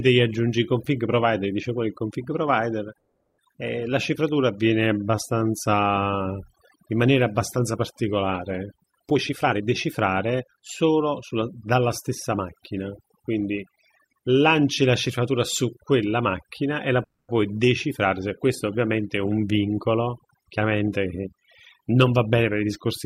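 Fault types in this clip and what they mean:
overdone noise removal: Throughout the speech, a noise reducer set far too hard mutes any frequency band it judges close to the noise floor, so weak parts of the voice disappear along with the hiss. The pauses fall to near silence dotted with twinkling specks. A spectrogram shows a dark, almost empty background scattered with isolated bright dots and ragged, patchy edges on the harmonics.
call audio freeze: At 2.97 to 3.40 s the sound stalls and the last fragment is stretched into a fading buzz for about 410 ms, ending in 20 ms of silence. At 17.04 to 17.34 s a 250 ms fill includes 110 ms of silence. Playback then resumes where it stopped, with nothing lost. The likely cause is delayed packets emptying the jitter buffer. The waveform shows a decaying smear, and the spectrogram shows smooth horizontal streaks with no speech structure.
skip ahead: Right after "qual il config provider", at about 3.52 to 3.55 s, roughly a third of a second of speech is gone. 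Playback jumps forward, and the two sides are butted together with only a 10 ms join. The result is an abrupt cut in mid-flow that clips a syllable or more. The waveform shows a sudden change in envelope with no pause, and the spectrogram shows formant tracks that break off and restart at a different shape without any transition.
jitter buffer slow-down: From 3.90 to 6.38 s, between "il config provider eh" and "in maniera abbastanza particolare", the receiver repeats single pitch periods and slivers of pauses to rebuild its reserve. This adds about 301 ms and brings the speech to 88 percent speed. The pitch stays the same, but the sounds are drawn out. The waveform shows stretched vowels made of near-identical repeated cycles, and the spectrogram shows harmonics that run longer than normal without shifting in frequency.
jitter buffer speed-up: At 9.11 to 11.75 s the speech runs at 116 percent, with about 400 ms cut out. 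After "ovviamente è un vincolo", from 20.45 to 21.34 s, it runs at 120 percent with about 200 ms removed. From 21.80 to 22.44 s it runs at 111 percent with well under a tenth of a second dropped. In each case short pitch-period chunks are removed to reduce delay, so the speech sounds hurried at an unchanged pitch. Both the spectrogram and the waveform show compressed syllables and shortened vowels with harmonics at their usual heights.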